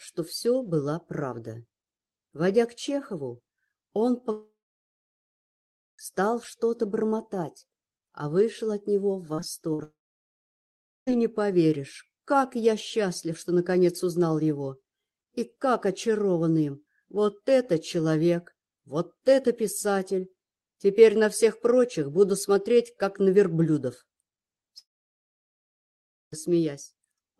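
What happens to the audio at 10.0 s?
A likely long network dropout runs from 9.83 to 11.13 s: a brief fading buzz, then about 1.1 s of silence, and the audio resumes with that stretch missing rather than just glitching.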